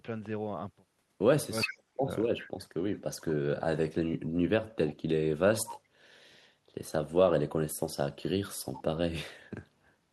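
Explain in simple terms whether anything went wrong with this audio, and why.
Three kinds of problem can be heard in this speech recording.

The first is an echo leak. At 1.64 to 1.77 seconds, and again at 2.4 to 2.49 seconds, a delayed copy of the talking comes back. It trails the original by about 0.4 seconds. The second copy is quieter than the first. This is likely a loudspeaker on one end of the call. Its sound reached the microphone, and the echo canceller failed to remove all of it.

The second is speech suppressed in double talk. From 1.66 to 2.1 seconds, the talker's voice sinks sharply, almost to nothing at its lowest point. The affected stretch adds up to about 0.4 seconds. It overlaps the first echo. Both sides were likely sounding at once. The echo canceller could not tell the real talker from the echo, so it turned everything down together.

The third is background gated by the echo canceller. 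From 9.73 to 9.93 seconds, the room sound dips briefly, for about 0.15 seconds in all. Then it comes back. The echo canceller pushed the microphone down hard while the loudspeaker was playing. When it let go, the background returned.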